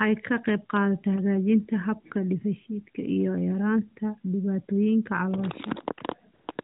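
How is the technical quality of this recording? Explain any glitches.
The recording carries the narrow, telephone-band character of an AMR narrowband mobile link, with nothing above 4 kHz, and the coding damage itself is light. The glitches come at the very end.

AMR comfort noise appears from 6.34 to 6.48 s, again from 6.52 to 6.58 s, and once more at 6.62 s. In these gaps the real background gives way to a smooth, even hiss that switches in and out. The phone judged the talker silent and stopped sending speech frames, so the receiver filled each pause with synthetic noise rebuilt from a rough estimate of the background's level and spectrum.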